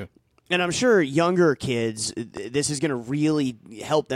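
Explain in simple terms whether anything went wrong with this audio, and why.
A loud pop breaks into the speech between 2.37 and 2.39 s, right after "I'm sure younger kids" and before "is going to". It is one short burst, louder than the voice around it, and the speech carries on underneath without a gap. That sets it apart from a dropout, where sound goes missing. The likely cause is a sudden jolt of electricity, from a plug, a switch, static or a driver glitch, jumping into the recording.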